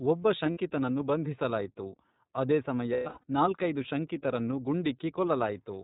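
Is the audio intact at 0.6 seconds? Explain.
No. At 0.6 s the speech sounds band-limited, slightly rough and synthetic, with nothing above 4 kHz. This is iLBC codec damage, plainly audible throughout. The narrowband codec, at 13.33 kbps with 30 ms frames, codes each frame's excitation on its own and discards the upper band.

Just before that moment, from 0.51 to 0.57 s, there is a held, faintly buzzy vowel-like sound. This is lost iLBC frames: 60 ms of audio, which fits two frames, went missing. The decoder filled the gap by repeating the last pitch cycle mixed with noise. Because each frame stands alone, normal decoding resumes almost at once with "ಬಂಧಿಸಲಾಯಿತು ಆದೇ ಸಮಯ ನಾಲ್ಕೈದು".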